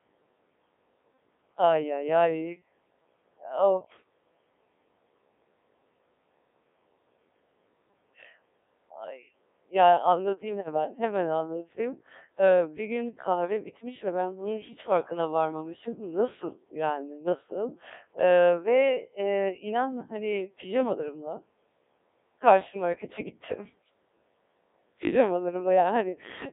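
The whole recording has passed through the Codec 2 vocoder at a very low rate, about 1.3 kbit/s. Only pitch, voicing, energy and a coarse spectral envelope survive, and the decoder rebuilds the speech from sine waves instead of keeping the original waveform. The result is heavily damaged: the speech sounds robotic and buzzy throughout, confined to a narrow band of roughly 250 Hz to 3.7 kHz.

From 10.60 to 10.68 s, bit errors on digital voice radio corrupt the stream. A small share of bits, around a couple of percent, arrive flipped, and in a vocoder this sparse each bit sets the pitch, level or tone colour of a whole frame. For this brief moment the synthetic speech lurches into a wrong pitch and timbre, a short warbling blip that points to a single damaged frame.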